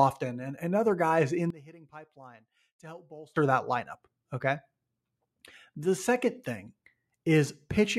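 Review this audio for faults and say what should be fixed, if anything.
From 1.50 to 3.36 s the speech drops about 22 dB, likely one channel inverted cancelling in mono. Check channel polarity and listen to the mono sum before release.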